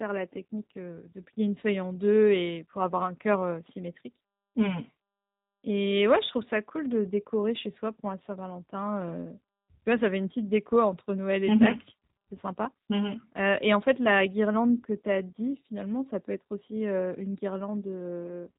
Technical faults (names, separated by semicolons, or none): G.729 codec